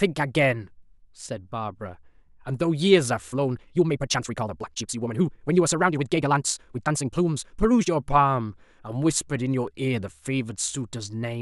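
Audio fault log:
3.26–7.9 s, time-stretched section: speech runs about 1.8 times faster at unchanged pitch, sounding rushed, likely from software dropping short pieces to shorten it.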